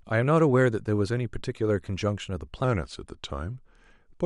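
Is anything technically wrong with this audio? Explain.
Yes. Wrong sample rate from 2.64 s to the end at 4.25 s: the samples play at a lower rate than they were captured at, with no conversion. This fits 48 kHz material played at 44.1 kHz. The speech slows to about 0.92 times its speed and drops about 1.5 semitones, sounding lower and more sluggish.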